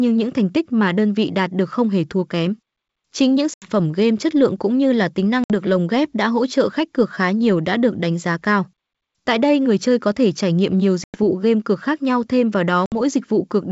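Hard-edged silent gaps open at 3.54 s (80 ms, before "game chất lượng cũng"), 5.44 s (60 ms, after "cũng như là tính"), 11.04 s (100 ms, after "thể trải nghiệm nhiều") and 12.86 s (60 ms). After each, the speech returns slightly distorted before settling. This is packet loss on an ADPCM call: a few packets drop, and the decoder's predictor and step size drift from the sender's until they resettle.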